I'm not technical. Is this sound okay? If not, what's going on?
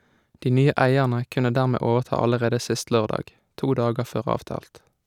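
Yes, it's fine: nothing in this recording sounds broken or out of place, so there's nothing to worry about here.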